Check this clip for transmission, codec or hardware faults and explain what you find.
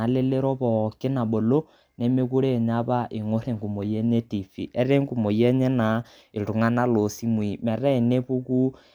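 No faults found on listening: the speech shows no dropouts, glitches, distortion or level disturbances.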